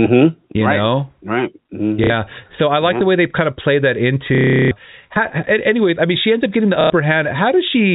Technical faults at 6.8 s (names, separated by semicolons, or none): one channel drops out; packet loss with last packet repeated